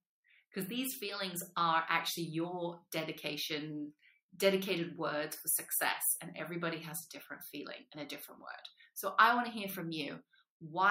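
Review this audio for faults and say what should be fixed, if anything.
Nothing stood out on listening, so there is nothing here that needs fixing.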